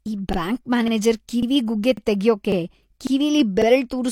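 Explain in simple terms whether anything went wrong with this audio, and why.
The speech has overlapping chunks: about every half-second, at 0.33, 0.88, 1.43, 1.97, 2.52, 3.07 and 3.62 s, a 48 ms sliver plays twice. Each new piece starts before the previous one finished, giving a regular little stutter.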